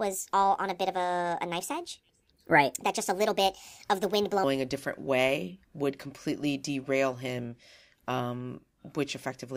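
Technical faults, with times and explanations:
0.00–4.44 s, section at the wrong speed: the speech runs 1.38 times too fast, so pitch rises about five semitones and pacing hurries together, likely from a wrong playback clock, unlike a pure pitch shift. Normal speed returns at "a different way would".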